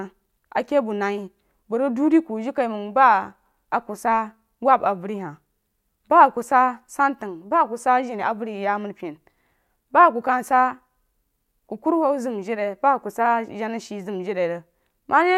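Nothing goes wrong anywhere in this speech recording, so there's no fault to point to at any moment.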